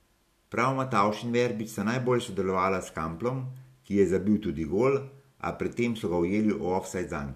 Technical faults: none

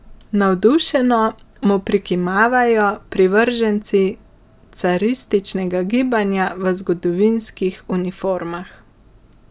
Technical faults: none

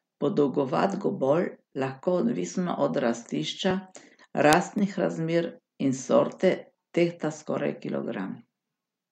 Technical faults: block of digital silence

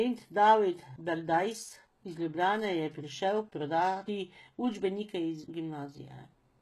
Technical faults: HE-AAC compression

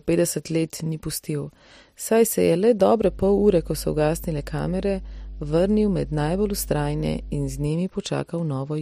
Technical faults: mains hum

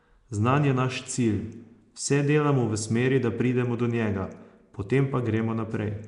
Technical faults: Nellymoser compression

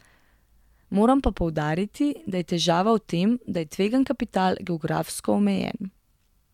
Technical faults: none

